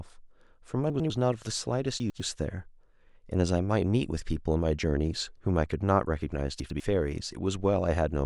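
At 0.9–1.1 s, 2.0–2.2 s and 6.6–6.8 s the speech jumbles briefly: chunks out of order, each 100 ms chunk playing one chunk late. On a spectrogram, formant tracks jump backwards, and the waveform shows three hard discontinuities per event.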